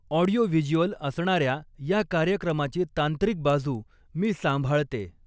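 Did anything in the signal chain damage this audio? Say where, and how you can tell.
Yes. The sample-rate conversion stage has the resampler restarted on every block. Regular ticks at 4.0 Hz run through the whole speech clip, one at each 250 ms block edge, where the 44.1 kHz to 16 kHz converter lacked true neighbouring samples and left a small error.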